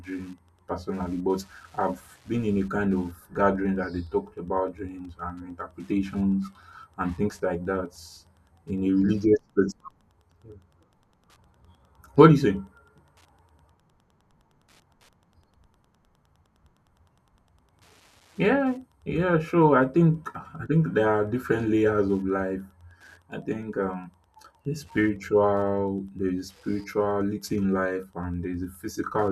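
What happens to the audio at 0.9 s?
At 0.9 s a faint, steady ticking about ten times a second sits roughly 40 dB below the speech, as it does throughout the clip. This is Wi-Fi interference: a nearby radio's beacon, every 102.4 ms, is rectified by the audio circuit.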